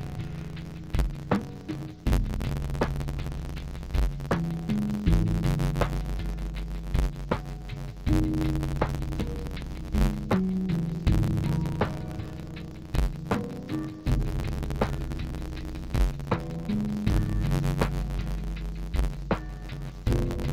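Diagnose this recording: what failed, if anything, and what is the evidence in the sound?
Interleaved audio read as planar, throughout: a sample-format conversion fault splits each 10.88 ms block into halves, giving dull, robotic sound buzzing at about 92 Hz.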